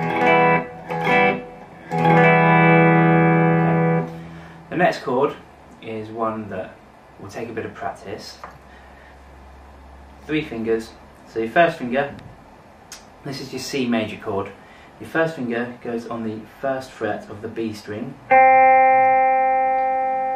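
Nothing in this recording stands out as a technical problem at any point, so there's nothing here to walk through.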